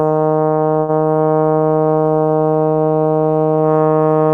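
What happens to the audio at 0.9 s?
A short stall from a late packet runs from 0.79 to 0.90 s. The jitter buffer ran empty, so the music holds for about 90 ms before resuming where it stopped.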